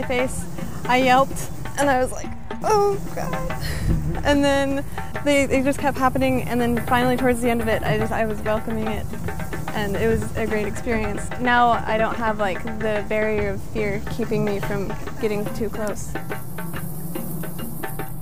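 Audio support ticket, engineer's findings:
DC offset throughout, about -30 dBFS. Waveform sits shifted off zero by a constant. Not audible as such; eats headroom, shows as steady energy at the bottom of the spectrum.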